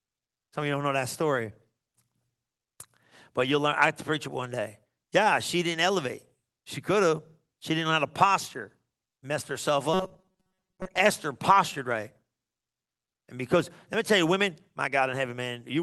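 Clock drift between sender and receiver runs through the whole recording: the sending device's clock is running roughly 4 percent fast, so audio arrives a little quicker than the receiving end plays it out. The jitter buffer keeps filling, and the receiver has to keep discarding small slices of speech to avoid falling further behind. On a waveform this looks like tiny seams scattered through the signal rather than any single obvious break.

Those repeated timing corrections can be followed from 0.12 s to 15.78 s. Each is a short cut, all in the same direction, landing at irregular spacing, so the speech plays out at about 103 percent of its natural pace with faint hiccups and a slightly hurried, uneven rhythm. A spectrogram shows small discontinuities where harmonic tracks jump abruptly instead of gliding, spread unevenly along the timeline.

From 9.94 s to 11.00 s the speech turns into a rigid, metallic buzz that still loosely follows the syllables. 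This is robotic sound from repeated short buffers. Fresh audio likely stopped arriving often enough, and most of that second was filled by looping a fragment of roughly 5.3 ms. That loop imposes a fixed 188 Hz pitch. On a spectrogram the natural, moving harmonics are replaced by flat, evenly spaced horizontal lines at multiples of 188 Hz. The waveform shows a short cycle repeating almost identically.

Through the Opus call path, the spectrum stops at about 12 kHz, with the codec's usual coding texture.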